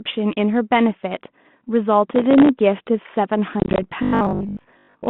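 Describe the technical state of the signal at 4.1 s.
At 4.1 s the speech is in robotic sound from repeated short buffers (4.03 to 5.09 s), likely from audio arriving too seldom. About half the time is filled by looping 20 ms blocks, forcing a rigid 50 Hz buzz. The waveform shows identical 20 ms repeats, and the spectrogram shows a comb of harmonics spaced 50 Hz apart within the telephone band.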